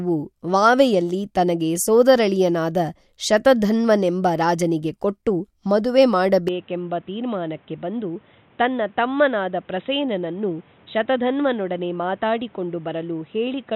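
From 6.48 s to the end the speech turns abruptly dull and boxy, with no gap at the change. Nothing above 3.9 kHz survives, the level falls a few decibels, and a faint new noise floor appears. The input was likely switched to a poorer device with a narrower band.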